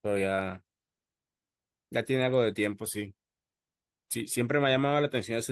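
A short piece of speech with nothing technically wrong to point to anywhere in it, so there are no times or causes to report.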